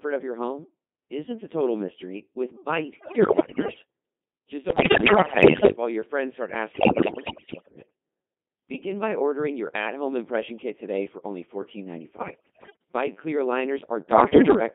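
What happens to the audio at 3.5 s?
Bit errors on digital voice radio hit from 2.98 to 3.82 s, just after "total mystery with bite". Roughly one bit in five arrives flipped, corrupting the pitch, level and voicing the decoder rebuilds, so the sound lurches into warbling, bleeping gibberish. That sets it apart from the steady robotic buzz of the Codec 2 vocoder heard throughout, whose sine-wave resynthesis fits a 2.4 kbit/s mode.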